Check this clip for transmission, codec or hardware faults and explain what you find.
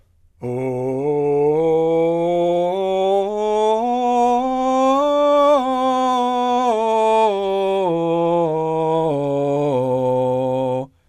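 No faults can be heard anywhere in this music.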